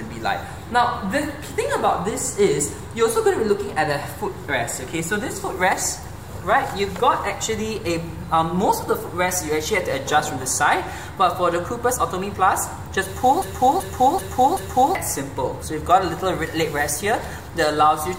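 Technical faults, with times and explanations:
13.42 to 14.95 s: broken-record loop. A 0.38 s fragment plays four times back to back, and the sound meant for that span is lost. Unlike an echo, the copies neither fade nor overlap but repeat identically at full level, likely from a stalled stream resending its last fragment.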